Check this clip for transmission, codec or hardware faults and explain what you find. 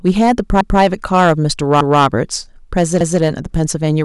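Two faults are present in this speech clip: hard clipping across the whole recording, and overlapping chunks producing three repeats.

Hard clipping, throughout: the signal is pushed about 8 dB beyond what a stage in the chain can pass, so the tallest peaks, a small fraction of samples, are sliced flat. Those squared-off tops create high harmonics, heard as crackle riding on the louder syllables.

Overlapping chunks, at 0.61 to 0.81 s, 1.81 to 2.01 s and 3.01 to 3.21 s: the audio is handled in 1.0 s blocks, and each new block begins 200 ms before the previous one finishes. That stretch plays twice at every join, giving a regular stutter about every 1.2 s.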